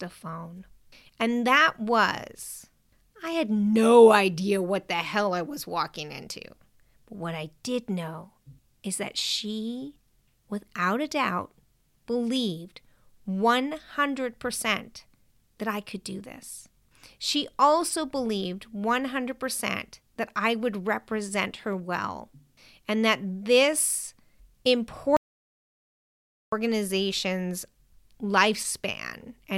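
Speech clip with one audio dropout to silence, running from 25.17 s to 26.52 s. The signal cuts off mid-flow and about 1.36 s of audio is simply missing. The gap is silent, with no room tone or noise floor underneath, before the speech resumes abruptly. That pattern points to the input being lost while the recorder kept writing samples, likely a momentary disconnect, a failed link or an accidental mute.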